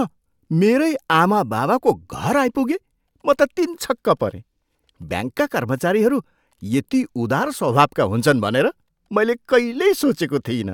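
No technical faults can be heard anywhere in the recording.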